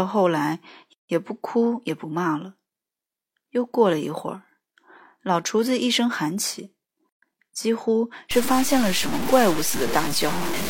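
A gap at a join of encoded pieces appears from 0.93 to 1.09 s, a silence of about 161 ms, and again from 7.09 to 7.22 s, about 130 ms, six seconds apart. Separately encoded segments were joined untrimmed, so each encoder's start-up delay and final-frame padding remain as abrupt, slightly smeared dropouts before the speech resumes where it stopped.

From 8.31 s to the end, the speech turns harsh and grainy, with distortion that tracks the signal and is almost as loud as the speech itself. This coarse stepping points to about 4 bits, with low bit depth without dither, likely truncated, as the cause.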